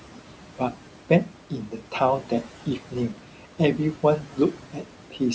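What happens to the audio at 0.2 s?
At 0.2 s a noise suppressor is running, as it does throughout the clip, pulling down every frequency band it judges to be steady noise by about 12 dB. The room noise, about 15 dB under the speech, sinks between words and rises beneath them.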